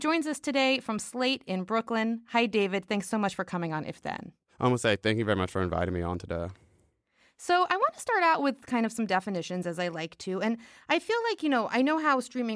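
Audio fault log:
No faults were found in this speech recording. Nothing in the audio calls for a timed entry in this log.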